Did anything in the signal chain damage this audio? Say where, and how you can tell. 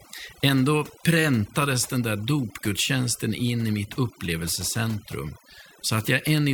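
Yes. The speech shows overdone noise removal throughout, at the call-processing stage, where a noise suppressor was driven too hard. Frequency bands near its noise estimate are pulled far down or shut off, so the gaps between phrases drop to near silence with twinkling specks, and the voice loses its quieter components too. A spectrogram shows isolated flecks scattered across an empty background and speech with ragged, hollowed-out harmonics.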